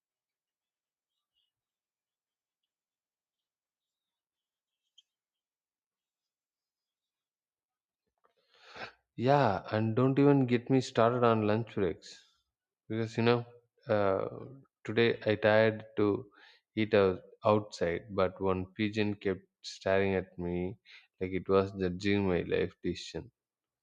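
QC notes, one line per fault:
No faults heard anywhere in this speech recording.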